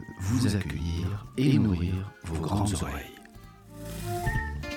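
Throughout the clip there is a channel delay, heard as doubling. One channel arrives about 85 ms late, which fits a 4096-sample buffer. When the channels are summed to mono, the late copy stands apart. Every sound gets a distinct slap echo at equal level.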